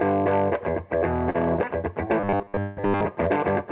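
At 1.30 to 1.36 s there is a short stall from a late packet: the jitter buffer ran dry, and about 44 ms of sound is held and stretched before playback resumes, with nothing lost.

From 2.20 to 3.01 s the sound turns robotic, into a rigid metallic buzz at 100 Hz. This is likely from repeated short buffers of about 10 ms looping in place of most of the real audio.

Inside that stretch, at 2.60 to 2.79 s, comes a call audio freeze. The last sound is carried on as a fading buzz or hiss for 170 ms, likely because the buffer emptied while packets were delayed, and then the audio resumes from where it stopped.

Throughout, the band-limited call path leaves nothing above 4 kHz.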